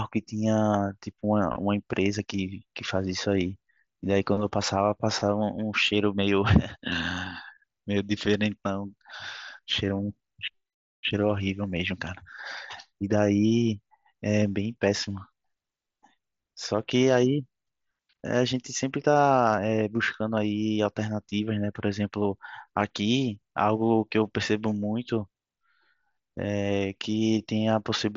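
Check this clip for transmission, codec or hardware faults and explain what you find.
No transmission, codec or hardware faults turn up in this clip.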